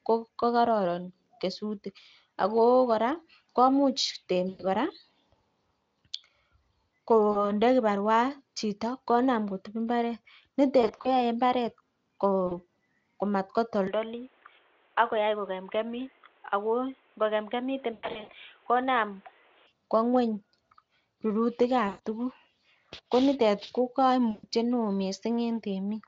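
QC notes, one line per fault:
4.49–4.65, 7.31–7.51, 10.81–11.08, 12.47–12.62, 17.93–18.34, 21.87–22.01 and 24.31–24.46 s, VoIP packet loss concealed by the speech codec: packets failed to arrive, so the decoder extended its last pitch and spectral shape while lowering the gain. The speech smears into a fading buzz or tinted noise. Most gaps are 40 to 120 ms, consistent with 20 ms frames. At 10.81 s, 100 ms is lost in pieces across 240 ms. The worst loss, at 17.93 s, totals 280 ms spread over 400 ms, with a longest run of 100 ms. Each time the voice stays weak or warped for a moment after packets resume.
13.87–19.67 s, input switched to a poorer device: the capture likely moved to a lower-grade microphone or a headset call profile, with no gap at the switch. Everything above 3.8 kHz vanishes, so the speech turns dull and boxy. The level drops by roughly 5 dB, and a new noise floor appears about 35 dB under the speech. 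At 19.67 s the band and tone return abruptly.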